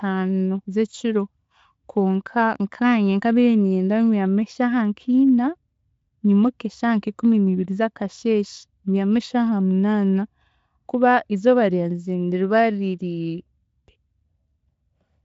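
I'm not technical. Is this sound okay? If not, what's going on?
Yes, the speech comes through intact, with no dropouts, distortion or other technical problems at any point.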